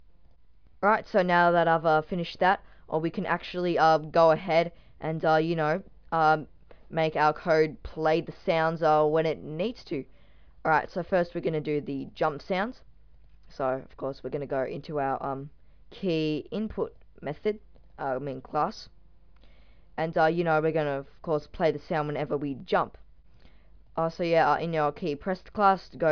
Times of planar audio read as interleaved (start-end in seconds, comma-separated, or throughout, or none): none